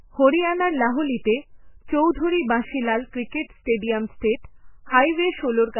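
Throughout the speech, nothing sounds above 3 kHz. Weak detail flickers in and out, giving a watery, swirly texture with metallic edges on s sounds. This points to heavy damage from a very low bitrate, likely MP3 compression near 8 kbps.

At 1.23 s, a pre-echo appears. A short hiss of about 26 ms comes just before an attack. Coding noise sized for the loud onset has spread back into the quiet gap. It returns at 3.11 s, after "বাঁশি লাল", lasting about 25 ms and smearing that attack.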